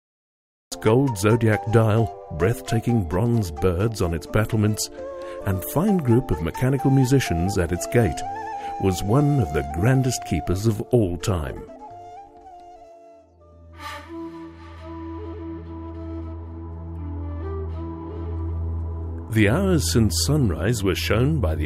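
From 0 to 0.72 s there is digital silence, and at 0.72 s the sound enters already in progress. That is a cut-off start: capture began late, so the opening of the event was never recorded and the audio picks up mid-sound. It lands abruptly, with no attack and no fade-in. Unlike a dropout, nothing preceded the gap, and unlike a noise gate opening, the sound arrives fully formed.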